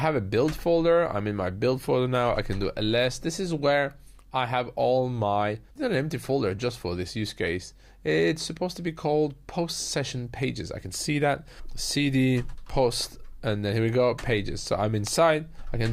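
Right around 5.75 s there's a stream segment skipped: the audio lurches forward with a quick blip that's over by about 5.81 s, and what follows doesn't pick up where the sound left off. That abrupt jump is likely one chunk of a segmented stream failing to arrive, with the player just moving on to the next chunk, so a slice of the material in between simply never plays.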